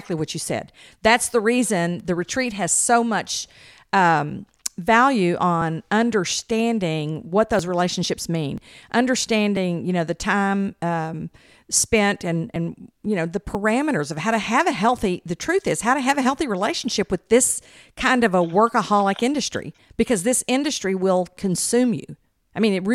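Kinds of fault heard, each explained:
Overlap between stream segments: tiny clicks or skips recur about once per second from 3.6 s to 13.5 s, one just after "retreat has so much". Overlapping time stamps between 1 s segments make the player discard roughly 7 to 20 ms of real sound, so the waveform jumps.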